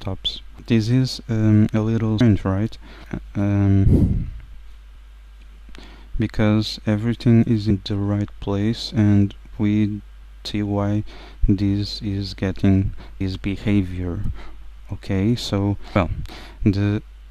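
Audio missing between chunks at 2.21, 10.46, 13.21 and 15.96 s: the sound jumps abruptly, likely because around a third of a second is lost at each 3-second chunk boundary.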